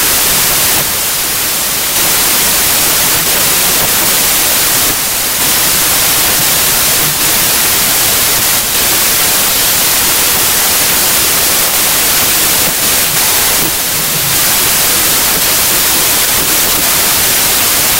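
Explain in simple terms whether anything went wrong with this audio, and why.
A wrong sample width fault runs through the whole clip. The sound comes out as loud noise, fast and high-pitched, about 1.33 times normal speed. It fits 24-bit audio read as 32-bit.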